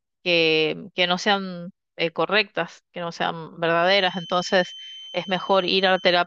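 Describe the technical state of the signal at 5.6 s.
At 5.6 s a feedback whistle sits behind the speech, running from 3.74 s to the end of the clip. It is a thin, steady tone near 3.1 kHz, roughly 20 dB below the speech, swelling and fading slowly in level. The likely cause is a loudspeaker-to-microphone loop held just at the edge of feedback, sustaining that one frequency without building further.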